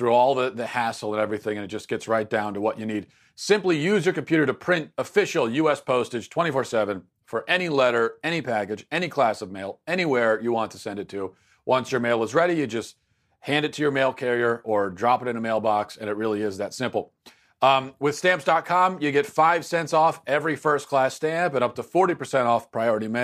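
From 0.12 s to 23.20 s the speech carries a faint, fast rattle of tiny ticks, roughly 25 per second, hundreds of them across the clip, most noticeable on louder sustained sounds and gone in the pauses. These are clock slip clicks, likely from two devices running on unsynchronised clocks about 700 parts per million apart, so a single sample is dropped or repeated each time that drift adds up to one whole sample.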